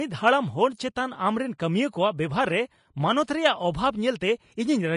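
From start to finish, the speech carries plainly audible codec damage, likely from Vorbis compression. Nothing is present above 10.6 kHz, so the top of the sibilants is missing. The treble that remains is coded so coarsely that fine detail turns into noise of similar energy. Consonants sound hissy and grainy. Voiced sounds take on a rough texture, and attacks are smeared. The damage fits a low bitrate around 32 kbps.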